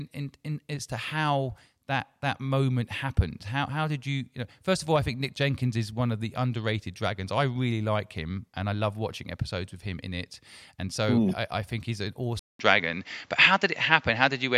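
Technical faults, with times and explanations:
12.39–14.58 s, input switched to a poorer device: after "I think he's an", a 200 ms gap, then nothing above 7.6 kHz, a level shift of about 5 dB and new faint background noise, likely from a change of input device.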